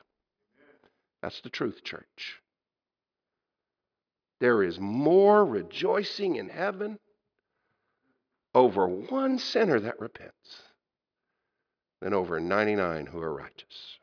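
No dropouts, clicks, distortion or other transmission faults can be heard anywhere in this speech recording.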